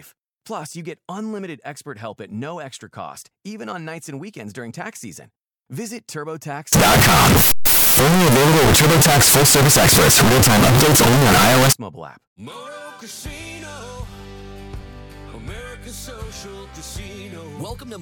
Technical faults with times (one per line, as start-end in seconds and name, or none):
6.73-11.73 signed and unsigned mixed up